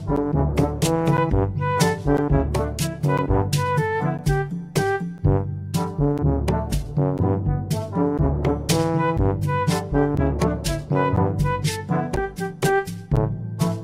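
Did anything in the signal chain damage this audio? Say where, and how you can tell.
Yes, at the driver stage: periodic USB or driver dropouts tick every 1.0 s from 0.16 to 13.17 s, each a stalled bus blanking around 10 ms to silence.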